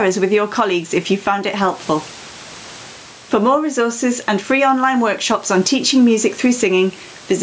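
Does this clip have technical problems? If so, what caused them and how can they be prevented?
Yes. Gain pumping runs throughout, with a gain swing of around 10 dB. The likely cause is input gain set far too high, so a fast limiter keeps clamping down. Lowering the microphone gain prevents this.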